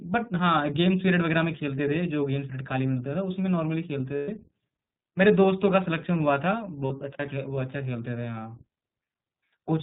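Throughout, the speech sounds band-limited and slightly rough and synthetic, with nothing above 4 kHz. This is the iLBC codec, whose plainly audible coding damage fits its 15.2 kbps, 20 ms frame mode.

From 4.16 to 4.30 s, and again from 6.86 to 6.92 s, the sound turns into a held, buzzy, breathy vowel for about 120 ms and 40 ms. These are lost iLBC frames, concealed by repeating the last pitch cycle mixed with noise. The voice recovers almost at once because each frame decodes independently.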